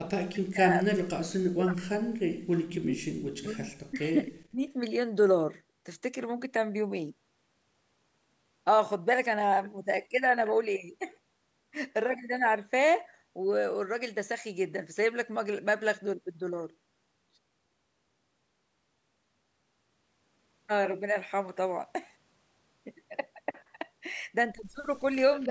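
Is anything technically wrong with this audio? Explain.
Yes, there are two faults. Speech suppressed in double talk occurs at 0 to 0.04, 0.27 to 2.13, 2.34 to 2.44, 2.67 to 3.72 and 3.9 to 4.66 s. The speech dips by up to about 40 dB or breaks into pieces, likely because an echo canceller could not separate its own talker from the overlapping far-end echo and turned both down. Unlike packet loss, the gaps follow the overlap rather than falling at random.

An echo leak appears at 25.41 to 25.47 s. A faint, delayed copy of the speech trails it by 277 ms, about 30 dB below the talker. It is likely residual loudspeaker pickup that the canceller failed to remove. Room reverberation would instead smear continuously rather than repeat as a distinct late scrap.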